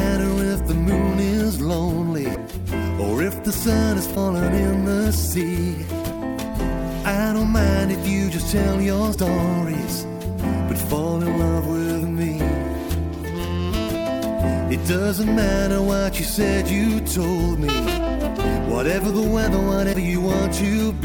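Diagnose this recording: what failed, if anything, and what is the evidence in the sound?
Broken MP3 bit reservoir, at 2.34 to 2.37 s, 4.14 to 4.17 s, 9.13 to 9.16 s and 19.92 to 19.95 s: four brief disruptions of about 30 ms each, roughly one frame long, which fits 26 ms MP3 frames. The stage is the codec, likely after frames were lost. A frame that borrows bits from earlier frames then reads bytes from a different frame, so the sound jumps forward and briefly decodes to garbage before it resynchronises.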